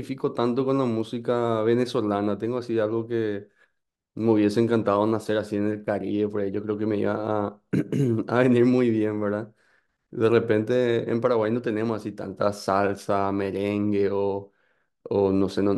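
Speech recording with no technical faults to report.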